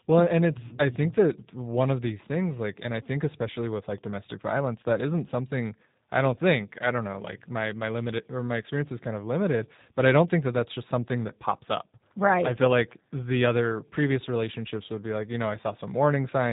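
From start to finish the speech carries plainly audible G.729 codec damage, the sound pointing to the 8 kbit/s G.729A variant used in VoIP. The codec keeps only a vocal tract filter, a pitch predictor and a few pulses per frame, so voices come out rough, buzzy and faintly synthetic. On a spectrogram all energy stops at a flat ceiling near 3.8 kHz, with smeared harmonics below.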